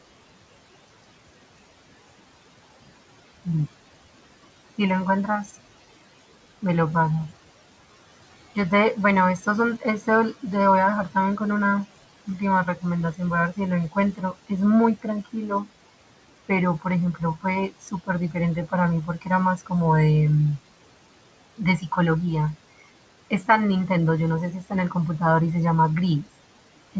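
Noise suppressor artifacts run throughout: room noise about 18 dB below the speech is pulled down by about 17 dB between phrases and rises under them.

Speech cut by the noise suppressor at 5.45, 9.45, 12.27, 16.49, 21.58, 23.3 and 24.62 s. Speech taken for noise drops by up to about 18 dB, heaviest from 12.27 to 19.72 s, so syllables sound swallowed.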